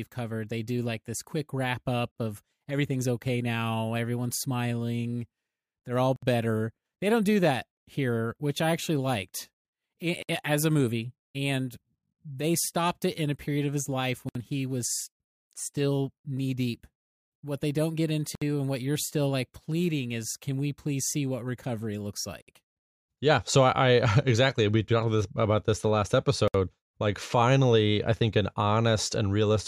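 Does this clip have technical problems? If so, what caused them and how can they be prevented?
Yes. There is a gap at a join of encoded pieces every 4.0 s, at 2.11 s (49 ms, after "this quick wrap up"), then 6.16, 10.23, 14.29 (after "period of his life"), 18.35, 22.42 (after "see what recovery looks") and 26.48 s, each about 64 ms. Separately encoded segments kept their start delay and end padding, which show as flat waveform dropouts and narrow vertical blank bands on a spectrogram. Trimming encoder delay and padding, or encoding continuously, prevents this.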